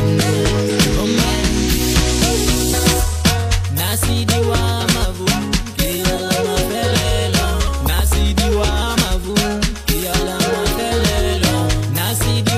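Three brief glitches break up the sound at about 0.65 to 0.70 s, 4.79 to 4.85 s and 8.92 to 8.97 s, each roughly 50 ms long and spaced about 4.1 s apart. The cause is damaged data in a compressed stream: the decoder misreads corrupted frames, loses sync and resumes at the next valid header.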